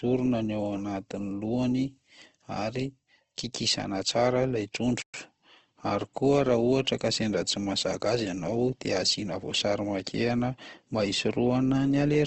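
Throughout the speech, the sound is thin and grainy, with a hard ceiling at 8.4 kHz. This is likely Opus compression in its CELT music mode, at a low rate that fits roughly 16 kbps. When bits are scarce, the encoder keeps each band's energy but fills the detail with folded or noisy content. Consonants and vowels therefore turn rough rather than swirly. On a spectrogram, everything above 8.4 kHz is blank, and the bands below look smeared and speckled instead of crisply harmonic.

At 5.02 s the audio cuts out for 120 ms and resumes at 5.14 s. This is a playback stall: the output went silent because the player likely ran short of data or its thread was held up, and the sound picks up again once it recovered. It is heard as an abrupt gap in mid-flow. On the waveform it shows as a flat, empty stretch with sharp edges. On the spectrogram it appears as a clean vertical band of silence across all frequencies.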